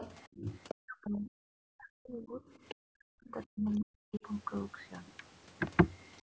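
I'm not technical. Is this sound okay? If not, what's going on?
No. Two problems show up. First, the other side's voice leaking through: a second, quieter voice is heard under the speech from 0.00 to 0.28 s, 0.68 to 0.74 s, 2.49 to 2.75 s and briefly at 3.3 s. This is likely echo from the loudspeaker that the call's echo canceller didn't fully remove.

Second, speech suppressed in double talk: the talker's voice sinks or nearly vanishes at 0.30 to 0.49 s, from 0.74 to 2.41 s, and from 2.76 to 4.24 s, at times dropping very far. Most likely both people spoke at once, and the echo canceller turned down the talker along with the echo.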